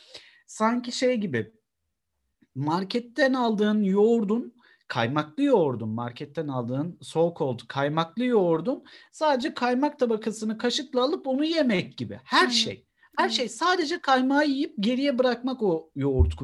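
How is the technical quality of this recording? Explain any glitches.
Nothing wrong is audible in the recording, so there are no glitches to explain.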